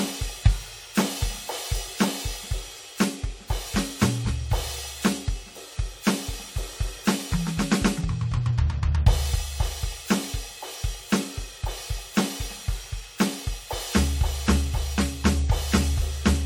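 From start to end, the music shows generation loss: it sounds swirly, hollow and smeared, with blurred attacks and nothing above about 19.6 kHz. This likely comes from about three passes through AAC-LC near 64 kbit/s, each requantising on a shifted frame grid so artefacts accumulate.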